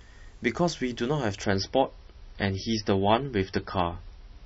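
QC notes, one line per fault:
1.44 s to end, adaptive stream at a lower bitrate: the speech drops abruptly to a thinner, smeared version with no gap or dropout at the switch, and everything above about 5.9 kHz is gone, so sibilants dull and a watery, swirling artefact layer appears. The stream has stepped down to a much lower-bitrate encode, which fits a move from around 128 to 24 kbit/s MP3. Unlike a lowpass filter or bandwidth limit, the change is sudden mid-clip and brings codec artefacts, not just lost treble.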